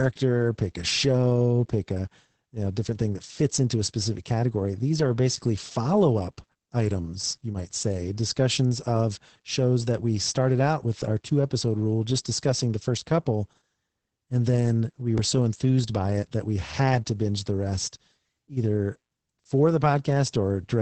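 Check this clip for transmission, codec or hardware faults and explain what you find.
One codec fault runs through the whole recording.

Opus voice compression is present from start to finish. The encoder is working in its linear-prediction voice mode at wideband, so nothing survives above about 8.6 kHz. It models the voice as a filtered excitation and codes that excitation coarsely, and the heavy damage fits a bitrate around 10 kbps. The speech sounds muffled, with no air or crisp sibilance. It also has a hoarse, slightly robotic, buzzy edge.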